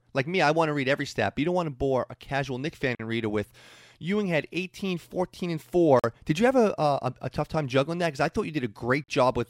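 The speech was delivered in 3-second chunks, and each join leaves a 44 ms gap between chunks, at 2.95 to 2.99 s, 5.99 to 6.04 s and 9.04 to 9.08 s. No sound is lost, but each join becomes a brief hole in the speech.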